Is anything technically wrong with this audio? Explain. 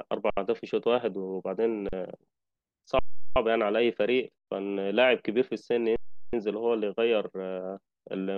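Yes, the speech stalls five times from underrun with held sample: 0.30 s (70 ms), 1.89 s (39 ms), 2.99 s (372 ms, fitting a 16384-sample stall), 4.38 s (93 ms) and 5.96 s (372 ms). Each time the output buffer empties and the converter freezes on its last value, so the waveform goes flat. That is why the sound simply halts without a sharp click. Nothing is skipped, and playback resumes where it stopped, so each restart is soft.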